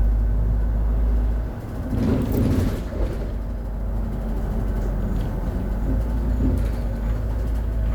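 Nothing technically wrong can be heard in this recording of sounds. No technical fault turns up anywhere in it.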